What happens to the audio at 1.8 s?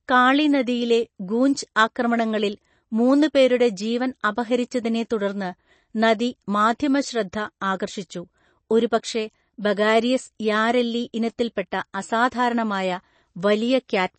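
A pre-echo occurs at about 1.75 s: a short hiss of roughly 11 ms arrives just ahead of a sharp attack. The codec spreads its quantisation noise across a whole transform block, so when a sudden onset lands late in that block, noise scaled to the loud part spills into the quiet instant before it. The result is a brief smear of hiss leading into the attack, which loses its crisp edge and sounds softened.

This moment also carries the clip's constant MP3 compression damage. The speech has nothing above 8.3 kHz, and weak frequency lines drop in and out from frame to frame, giving a watery, swirling texture with metallic chirps on sibilants. The heavy loss of treble and the clearly audible damage fit a low-bitrate encode of around 32 kbps, and an MP3 encoder that ran short of bits is the likely cause.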